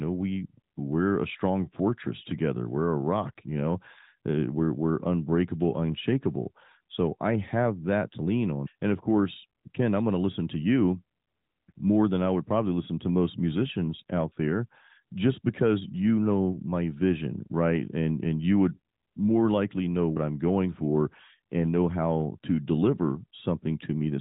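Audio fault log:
No fault to log.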